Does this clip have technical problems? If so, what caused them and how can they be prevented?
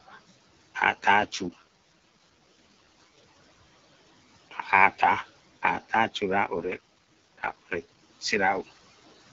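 Yes. There are two kinds of fault. The first is an AMR rate drop, heard twice: from 1.13 to 3.18 s and from 6.58 to 8.10 s. In both spans the speech turns rougher and more synthetic. The bandwidth stays the same, and there is no gap. The sound fits the AMR-WB codec stepping down from 12.65 to about 6.6 kbit/s on a weak radio link. The network then spends the freed bits on error protection. At that low rate the vocal tract model has too little detail, and the voice grows raspy. The clarity returns when the rate goes back up. Prevention: keep the handset in good radio coverage so the network has no reason to lower the codec rate.

The second fault is speech cut by the noise suppressor, from 4.51 to 4.66 s. The noise suppressor mistook part of the speech for background noise. It pulled that sound down by about 11 dB, the same way it lowers the room noise. The affected sound lasts about a tenth of a second in all, and it comes out swallowed and faint. 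The room noise sits about 22 dB below the speech. Prevention: use a gentler suppression setting so soft, low-level speech is not classed as noise.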